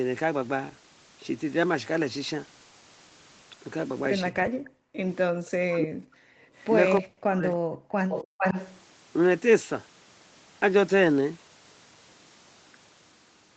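Between 4.63 and 5.01 s the background is gated by the echo canceller. The room tone is pulled down by about 40 dB while the far-end loudspeaker plays, then released. On a waveform the noise floor drops to a near-flat line. On a spectrogram the broadband haze vanishes as a clean vertical band. The same gating returns from 7.76 to 8.09 s and again, briefly, from 8.27 to 8.38 s.

From 5.4 to 6.2 s, and again from 7.0 to 7.57 s, the speech is suppressed in a way that likely comes from double talk. The canceller cannot tell the near talker from the loudspeaker echo, so it clamps both. The voice sinks very deeply or breaks into pieces, for about 700 ms the first time and 500 ms the second. The waveform envelope collapses in chunks, and the spectrogram shows the harmonics, upper ones first, thinning or cut into gaps.

At 6.57–6.73 s a faint echo leak appears, likely from a loudspeaker's echo canceller letting residue through. 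It is a delayed copy of the voice arriving 306 ms late, far quieter than the speech. A stronger leak runs from 8.09 to 8.78 s, delayed 433 ms and nearly as loud as the direct voice. On the spectrogram it shows as a shifted, smeared repeat of the harmonic pattern. The waveform shows a second, ghost envelope trailing the first.

The spectrogram also shows that the call's Opus path band-limits everything at 8 kHz.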